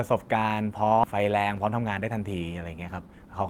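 At 1.03 to 1.05 s the speech makes a skip ahead: roughly 0.7 s of audio never plays, and the sound on either side is butted together with no silence or filler between. This is what sets it apart from a dropout or concealed packet loss. Nothing is muted or smeared over. The speech simply lurches forward, as if the receiver discarded a waiting backlog to catch up, leaving an abrupt join in the flow.

A jitter buffer speed-up follows from 1.65 to 2.05 s, with the speech running at 112% and about 50 ms removed in total. A stronger one at 3.02 to 3.27 s runs at 157% and drops about 150 ms. The receiver trims many short pitch-period slices in a row to shed excess buffered delay, so the speech sounds rushed while its pitch stays the same. A resampling speed change would instead raise the pitch along with the tempo.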